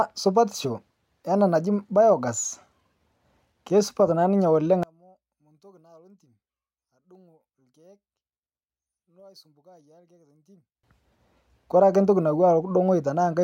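Speech, where one channel inverted is the likely fault from 4.83 to 10.83 s: with one stereo side's polarity reversed, the shared content cancels when the channels are combined to mono, so the voice drops by about 33 dB to a faint residue.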